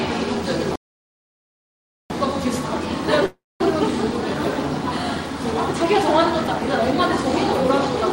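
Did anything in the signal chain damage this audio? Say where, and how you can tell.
Yes. The first damage is at the playback stage. At 0.76 s the sound stops mid-flow and the output stays silent until 2.1 s. That gap lasts about 1.34 s. There is no fade or buzz, just a hard stop and a later restart. That pattern is a playback stall. The likely cause is the player running out of buffered data, or its thread being blocked, so nothing reached the output until it recovered.

The second fault happens in the network. From 3.26 s to 3.61 s the audio breaks up. The receiver stretches the last sound it had into a fading buzz. That fill runs about 0.35 s and decays into roughly 0.23 s of silence. When the sound returns, about 0.2 s of material is gone. The playout timing also shifts by around 150 ms. That is a long network dropout, likely caused by packets never arriving.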